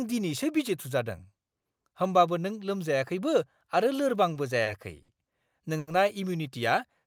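Four short stalls from a late packet occur, at 4.33, 4.63, 5.02 and 5.78 s. Each time the jitter buffer ran dry. The receiver held the last sound for 20, 30, 60 and then 90 ms, then resumed. Nothing is lost. The speech drags, with a slight buzz or dip.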